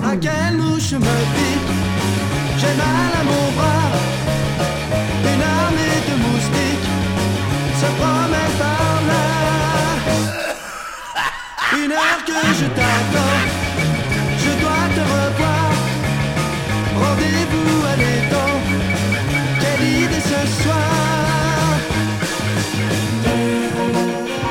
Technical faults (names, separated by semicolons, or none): none